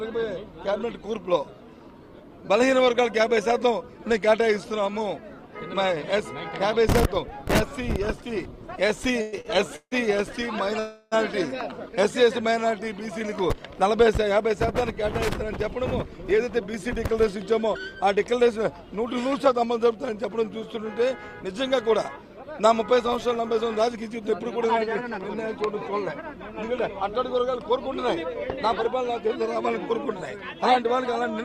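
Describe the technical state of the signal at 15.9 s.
At 15.9 s you're in the middle of a jitter buffer speed-up that runs from about 15.44 to 16.51 s. The receiver had built up more buffered audio than it wanted, so it kept snipping out tiny pitch-period-sized pieces back to back, about 70 ms in total, to catch up. The result is the audio running roughly 6% fast at unchanged pitch, so that stretch comes across a little rushed.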